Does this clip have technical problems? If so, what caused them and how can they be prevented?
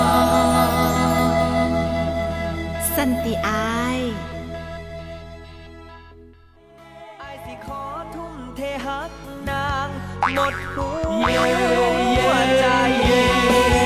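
No, nothing here points to a technical fault, so there is no cause to trace and nothing to prevent.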